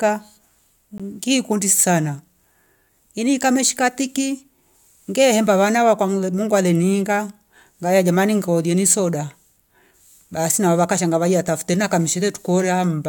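The clip is speech with a gap between stream segments at 0.98 s. A hole of about 16 ms of silence cuts into the sound there. Its edges are hard, so it reads as a brief dropout rather than a fade. The time stamps of two adjoining segments do not quite meet, and the player fills the space with silence. The segment length of 4 s suggests a segmented stream. Nothing is missing from the audio; the break only adds time.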